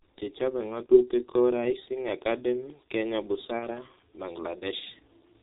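The whole recording passes through the G.723.1 codec, whose 30 ms frames, sparse voice model and 4 kHz ceiling, consistent with its 6.3 kbit/s mode, leave the speech heavily muffled and hoarse with smeared consonants. At 0.86 to 0.95 s and again at 3.59 to 3.68 s, VoIP packet loss concealed by the speech codec occurs: each gap, consistent with one lost 30 ms frame, is filled by extrapolating the previous pitch and filter, producing a brief buzzy or noisy, fading smear and weakened speech just afterward.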